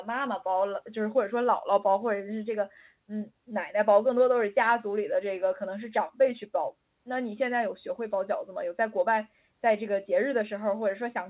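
No technical faults are audible.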